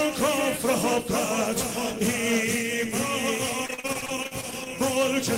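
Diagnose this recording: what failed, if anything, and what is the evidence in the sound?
Network stage: repeated packet loss (robotic sound) from 3.65 to 4.67 s. Over a dozen short holes, none longer than 43 ms, are patched by extending the preceding sound, so about 29% of that second turns choppy. Buffer underruns would instead leave clicks or silent gaps.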